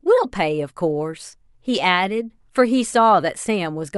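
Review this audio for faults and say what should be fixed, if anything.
Nothing here needs fixing; I listened through this speech and didn't catch a single fault.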